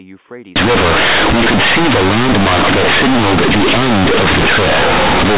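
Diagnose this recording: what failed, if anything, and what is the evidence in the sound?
At the sample-format conversion stage, A-law G.711 bytes were played as plain linear 8-bit samples with no expansion. From 0.56 s to the end, companded audio read as linear turns the speech into loud, buzzy distortion, quiet passages become as large as loud ones, and pauses fill with harsh noise.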